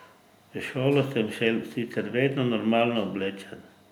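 No audible faults anywhere in the speech.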